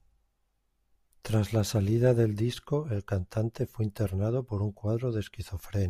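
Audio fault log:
Nothing stood out on listening to the speech.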